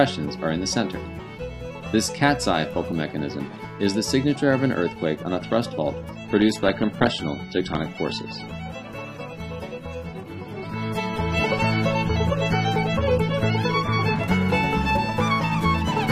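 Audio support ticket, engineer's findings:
Adaptive stream at a lower bitrate, 6.16–14.16 s. Artefacts rise, switching abruptly in and back out with no gap. Unlike a dropout or buffering stall, nothing is lost; sound fits AAC falling from 96 to 24 kbit/s.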